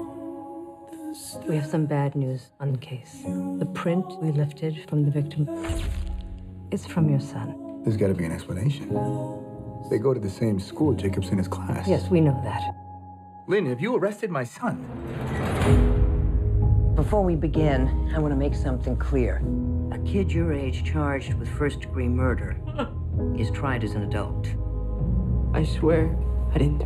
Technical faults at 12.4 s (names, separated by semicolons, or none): channel delay (comb filtering)